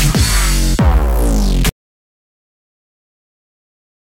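The audio runs normally until 1.69 s and then cuts out abruptly. From there to the end of the clip it is an audio dropout to silence. The gap is silent, with no room tone underneath. Nothing returns before the clip ends. The likely cause is a lost input, such as a disconnected device, a failed link or an accidental mute, while recording carried on writing empty samples. Whatever sounded after 1.69 s is gone.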